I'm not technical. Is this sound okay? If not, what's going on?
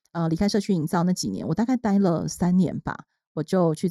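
No. Throughout the speech the sound is hollow and phasey, as if heard through a tube, with the upper part of the voice oddly thinned. This is channel delay (comb filtering): one of the two stereo channels runs a fraction of a millisecond behind the other, and when they are combined into one, parts of the sound cancel out at evenly spaced pitches, the first gap falling around 3 kHz.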